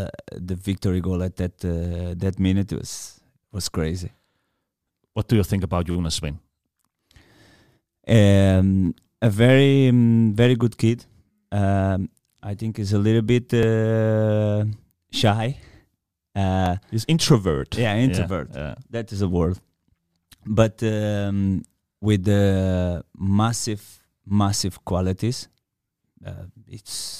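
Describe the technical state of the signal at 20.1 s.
At 20.1 s the speech signal is intact, with no technical fault present at that moment.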